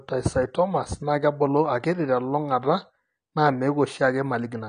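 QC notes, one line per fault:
throughout, AAC compression: the speech sounds dull and smeared, with nothing above 9.6 kHz and a warbling, fizzy edge on sustained sounds and sibilants. This is likely AAC-LC coding at a low bitrate, which fits about 32 kbps, quantising the spectrum coarsely and cutting off the top band.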